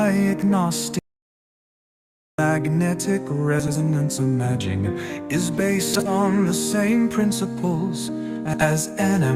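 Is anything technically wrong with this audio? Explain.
Yes, there are two kinds of fault.

From 0.99 s to 2.38 s the audio suffers an audio dropout to silence. About 1.4 s of sound vanishes mid-flow and is replaced by silence, with not even room tone remaining. The likely cause is the input being lost, through a disconnected device, a failed link or a stray mute, while the recorder kept writing silence. That silence with no room tone is what separates it from a quiet passage or a concealed packet loss, both of which would leave some background or smeared sound.

There are three brief instances of frames out of order, at 3.60–3.78 s, 5.93–6.09 s and 8.45–8.66 s. In each, two adjacent blocks of audio were decoded in swapped order: blocks of 80 ms, 60 ms and 80 ms respectively. Each stretch plays as a garbled flutter. Unlike a skip or a repeat, nothing is lost or duplicated, and the timing before and after stays intact.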